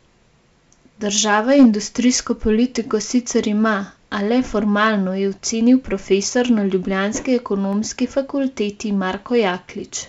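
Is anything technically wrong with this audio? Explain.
Yes, there are two faults.

From 1.32 to 1.65 s, the peaks crackle with a rough edge. This is hard clipping: the speech overdrives a stage by about 3 dB, so its peaks are cut flat.

At 7.73 s, just after "na ljubljanski", a single sharp click cuts through the speech. It is likely dropped samples: a tiny fraction of a millisecond goes missing and the waveform jumps.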